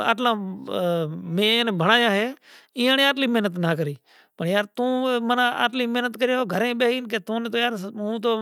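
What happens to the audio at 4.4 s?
Nothing goes wrong at 4.4 s: the speech continues cleanly through that moment with no dropout, click, glitch or change in level or tone.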